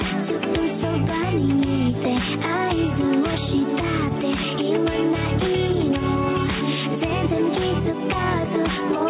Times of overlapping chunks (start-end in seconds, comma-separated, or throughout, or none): none